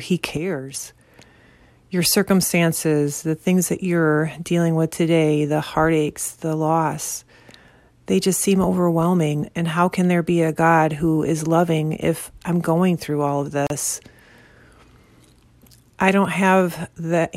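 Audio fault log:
0.37–0.74 s, sudden gain jump: the speech and the noise floor both drop about 7 dB at once, then snap back, likely a gain setting applied without any ramp.
13.67–13.70 s, gap at a join of encoded pieces: a 35 ms hole opens mid-speech because separately encoded chunks were joined untrimmed, and the speech then carries on from where it stopped.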